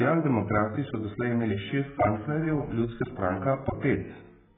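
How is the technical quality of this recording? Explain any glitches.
The technical quality is poor, held back by heavy AAC compression damage across the whole recording. The likely cause is an AAC-LC encoder starved of bits, consistent with a bitrate around 8 kbps. The result is speech with nothing above 3.7 kHz, sounding dull and smeared, with a warbling, fizzy texture.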